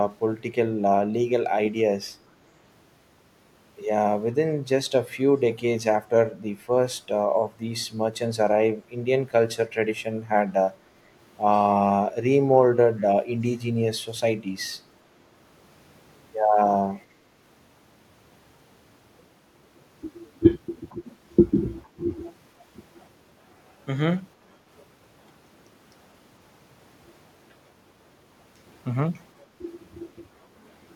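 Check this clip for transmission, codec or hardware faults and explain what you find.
Echo leak at 13.02–13.06 s, 16.95–17.04 s and 20.89–20.95 s: brief, faint copies of the speech return about 455 ms late, roughly 30 to 40 dB below it. The likely cause is a far-end echo canceller letting loudspeaker pickup through.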